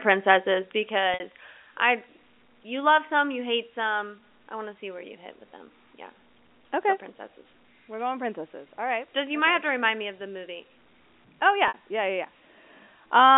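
At 1.14 s and again at 11.68 s the speech briefly holds a buzzy, repeated tone for about 60 ms: packet loss with pitch repetition, where the receiver loops the last pitch period over the missing audio.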